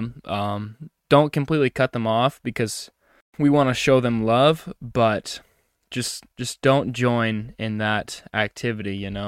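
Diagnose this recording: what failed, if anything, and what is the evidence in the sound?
Nothing in this recording points to a failure at any stage of the chain. The speech holds steady throughout, with no audible event that would implicate the wiring, the converter, the processing or the playback path.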